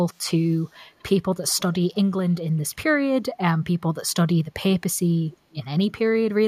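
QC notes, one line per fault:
0.51–0.75 s, 0.99–1.03 s, 1.48–1.75 s and 5.51–5.55 s, echo leak: a faint delayed copy of the speech trails in about 215 ms behind, in short scraps rather than one steady tail. The first two are very quiet, around 40 dB under the speech, and the later two come up to about 30 dB under. It's likely a far end on a loudspeaker whose echo canceller didn't fully remove what its mic caught, so a bit got sent back.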